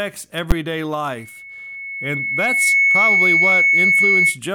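At 0.51 s, invalid numbers at full scale produce a single sharp bang. A calculation went infinite or undefined, and the output was pinned to the maximum value for about 10.7 ms, which fits a 512-sample block. On the waveform this appears as a flat slab far beyond the speech peaks. On the spectrogram it is a thin full-height vertical stripe.

From 1.16 s to 4.39 s, loudspeaker feedback squeal sets in. The microphone's pickup of its own loudspeaker exceeds unity gain at 2.2 kHz. Over roughly a second and a half, that tone swells into a piercing whistle sitting around 10 dB above the speech. A spectrogram shows one bright horizontal line thickening at 2.2 kHz, and the waveform's envelope grows steadily.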